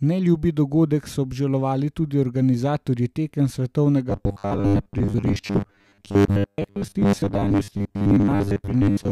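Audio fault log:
4.10–9.11 s, robotic sound from repeated short buffers: new audio likely arrived too seldom, so about 10 ms of sound was replayed over most of the span while real audio was skipped. The repeats force a fixed 100 Hz buzz, making the speech rigid and metallic while still loosely following it.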